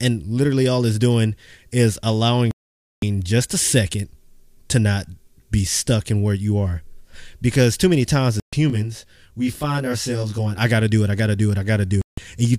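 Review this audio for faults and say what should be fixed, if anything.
Digital broadcast dropout: the receiver lost valid frames and muted at 2.51–3.03 s, between "it's doing is allowing" and "just a second"; at 8.40–8.53 s; and at 12.02–12.18 s, after "I gotta do it". Prevent it with stronger reception or error protection.

Channel delay (comb filtering) from 8.70 to 10.58 s, before "I gotta do it": one channel lags around 20 ms, and mono summing cuts evenly spaced notches starting near 30 Hz, giving a rough, slightly doubled sound. Prevent it by time-aligning the channels before any mono fold-down.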